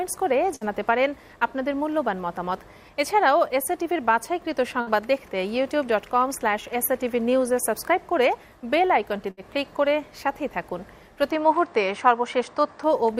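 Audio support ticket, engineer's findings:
Burst of packet loss, network path: three bursts, at 0.55–0.64 s, 4.81–4.90 s and 9.31–9.40 s. Concealment extends the last sound for about 60 ms and fades it, heard as a held buzz or fading hiss. Playback resumes with about 60 ms of audio skipped each time.

Input switched to a poorer device, capture path, 11.31–12.84 s: likely a change to a narrower-band microphone or headset call profile. The sound turns duller, with nothing above 9.2 kHz and a new noise floor about 50 dB down. No gap at the switch and no obvious level change.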